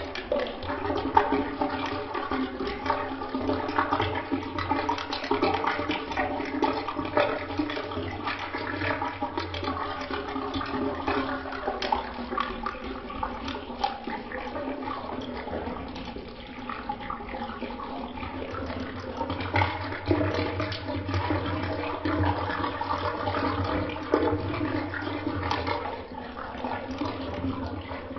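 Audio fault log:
throughout, wrong sample rate: everything drags at one third speed and sits 19 semitones low, which fits 48 kHz audio played back at 16 kHz without conversion.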